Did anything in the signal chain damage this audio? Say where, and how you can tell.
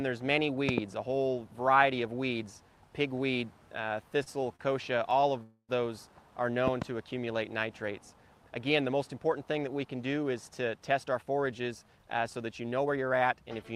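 Yes. Loud pops at 0.69 s and 6.68 s point to the analogue wiring or driver stage. Each is a double pop, peaking about 20 dB and about 15 dB above the signal, with the sound continuing underneath. That points to a likely voltage step from a plug, switch or driver glitch rather than a dropout.

Two short stalls from late packets, at 4.23 s and 4.56 s, come from the network and jitter buffer. The sound is held for 29 ms and 34 ms and then resumes from the same place, with nothing skipped. Unlike a freeze, each hold is brief, with no fade or silence.

A call audio freeze runs from 5.43 s to 5.71 s. The last sound is stretched for 261 ms, the final 50 ms of it silent, and then the audio resumes where it stopped. The length and the fade to silence separate it from the short stalls. The likely cause is packets held up in the network.

A jitter buffer speed-up runs from 10.93 s to 12.98 s. The sound plays at about 112% speed while the pitch stays the same, with around 0.3 s trimmed out in small pitch-period pieces. 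The unchanged pitch rules out a sample-rate mismatch, which would shift pitch along with speed.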